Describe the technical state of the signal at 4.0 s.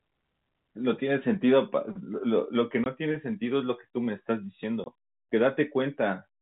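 At 4.0 s the speech is intact, carried as usual by G.711 A-law telephone coding with its narrow band topping out at 4 kHz.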